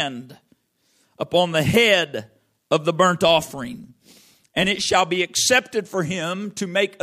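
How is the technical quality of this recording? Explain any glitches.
The recording has one fault in the speech, between 3.26 and 4.85 s, after "head of the burnt" and ending before "shall be accepted for": a filter restarted on every block. Each block starts from zero state, so a small transient repeats at about 46.9 Hz, which fits a 1024-sample block. It is heard as a buzz that rises and falls with the speech level.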